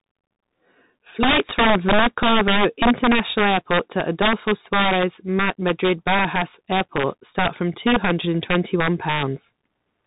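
Integer overflow runs throughout the clip. The speech is driven about 8 dB past full scale, and instead of being limited, the loudest peaks wrap around to the opposite sign. A small share of samples flip across the whole range, giving sharp, violent cracks on loud syllables, harsher than ordinary clipping.

A Bluetooth CVSD headset codec also colours the whole clip, consistent with a 64 kbps CVSD link. Each sample only steps up or down, so loud high-frequency sounds outrun the adapting step and distort. Nothing passes above 3.8 kHz, s sounds turn scratchy, and a granular hiss sits under the speech.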